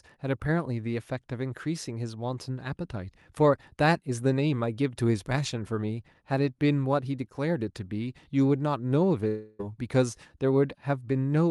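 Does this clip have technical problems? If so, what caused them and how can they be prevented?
Yes. From 9.27 to 9.61 s there is a long network dropout. About a third of a second of speech never arrives. The receiver fills nearly all of that gap by stretching the last sound into a fading buzz, so there is no true silence. Speech then resumes with that stretch simply gone. Packet loss on the network is the likely cause. The Opus call path around it tops out near 12 kHz. Preventing it means a steadier connection plus in-band forward error correction.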